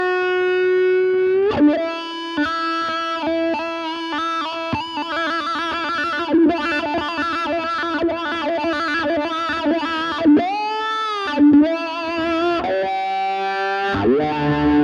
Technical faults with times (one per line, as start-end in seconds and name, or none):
none